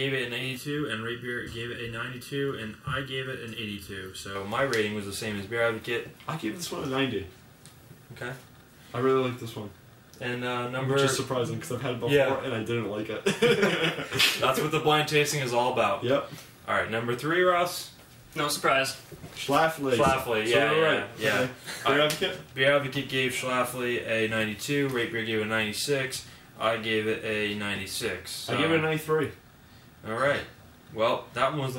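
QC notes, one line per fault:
0.57–4.35 s, channel delay (comb filtering): one channel runs late by under a millisecond, so the mono sum cancels at evenly spaced frequencies starting around 700 Hz, giving a hollow, phasey tone. The notches stay fixed, unlike a flanger's sweep.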